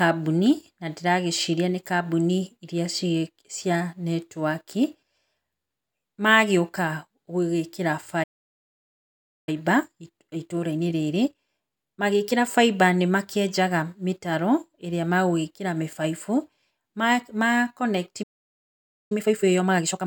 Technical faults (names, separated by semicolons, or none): playback stall; time-compressed catch-up